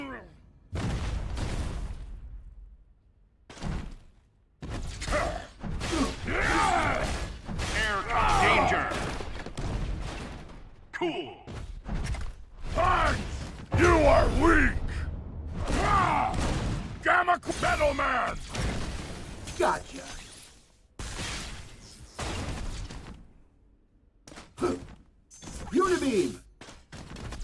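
No dropouts, clicks, distortion or other technical faults can be heard anywhere in the clip.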